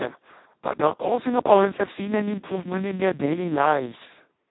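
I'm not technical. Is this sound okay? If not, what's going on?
No. Throughout the clip, the speech has been squeezed through the Speex codec, an old voice-chat compressor, set near its lowest quality. With so little data, the voice turns hoarse, buzzy and robotic, and everything above about 3.9 kHz is gone, so it sounds muffled.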